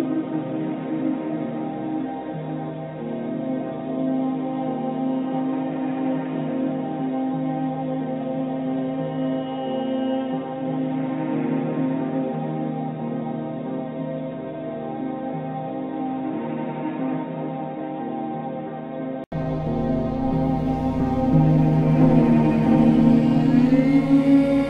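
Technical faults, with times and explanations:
0.00–19.32 s, input switched to a poorer device: for the first 19 seconds or so the sound is dull and boxy, with nothing above 3.8 kHz, a noticeably lower level and a noise floor sitting well under the signal. At 19.32 s there's an 80 ms silence, then everything opens up and gets a bit louder. That points to a likely switch from a narrowband input, such as a headset's call profile, back to the proper microphone.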